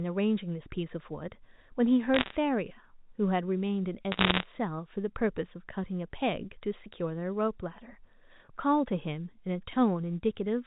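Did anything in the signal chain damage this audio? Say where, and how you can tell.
Yes. Bit errors on the digital phone line hit the transmission stage in two bursts, from 2.14 to 2.36 s and from 4.12 to 4.43 s. Each flipped bit corrupts one mu-law sample, and when the sign or a high-order bit is hit, the sample jumps far from its neighbours, so you hear sharp ticks as crackle over intact speech. The second burst is denser, at an error rate of around one and a half percent against roughly one percent for the first. On a waveform these show as isolated single-sample spikes. On a spectrogram they appear as thin vertical broadband lines.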